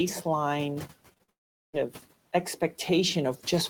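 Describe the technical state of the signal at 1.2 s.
At 1.2 s the signal is inside a run of short concealed packet loss: gaps at 1.13–1.18 s, 1.18–1.21 s and 1.23–1.30 s, each a multiple of 20 ms, which fits 20 ms packets. The receiver continued the preceding sound to cover them, so the audio smears and wobbles briefly. A spectrogram shows harmonics stretched flat and repeated, with soft seams where the real audio blends back in.

Right after, from 1.30 to 1.75 s, the audio drops out for about 0.45 s, likely from a long network dropout. A fading buzz or hiss gives way to near-silence, which shows as a flat, empty band in the waveform.

Noise suppressor artifacts run throughout. The low room noise is pulled down by about 18 dB between sounds and rises beneath them. On a spectrogram this appears as patchy, gated noise-floor texture.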